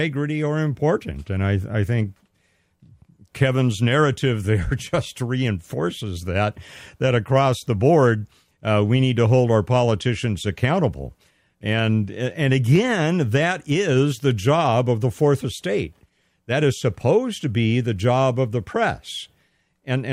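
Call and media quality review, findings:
No technical faults found in this speech recording; the signal path shows nothing requiring a ticket.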